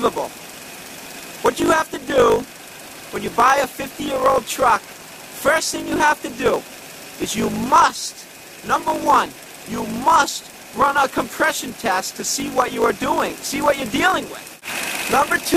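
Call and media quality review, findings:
Block size mismatch (truncated), whole clip. Constant 50 Hz buzz; audio runs 1.07x fast, timbre unchanged. Buffer handoff: writer blocks, consistent with 1024 samples, exceed reader size, so block tails are discarded. Spectrogram shows vertical seams every 20 ms; waveform shows matching step discontinuities.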